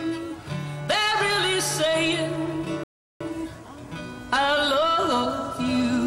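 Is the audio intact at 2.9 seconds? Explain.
No. At 2.9 seconds the sound has dropped into silence, a gap running from 2.84 to 3.21 s, before picking up exactly where it left off. This is a rebuffering stall: the player exhausted its downloaded audio and waited for more, adding 370 ms without losing anything.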